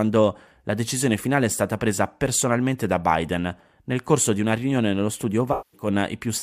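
From 5.52 to 5.88 s the speech breaks up with AAC frame loss with concealment. Roughly 213 ms of coded audio never arrived, which fits a run of about five AAC frames, so the decoder rebuilt the gap from the last good spectrum. It sounds smeared and noisy. On a spectrogram the harmonic detail blurs into a frozen, diffuse band.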